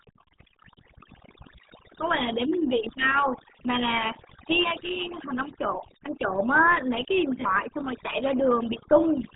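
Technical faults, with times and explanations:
Throughout: overdone noise removal. Bands near the noise floor are gated away, leaving near-silent gaps with twinkling specks.
Throughout: RealAudio 14.4 codec. Heavy coding damage at 8 kbit/s leaves nothing above 3.8 kHz, so speech sounds muffled and gargly, typical of this dial-up codec.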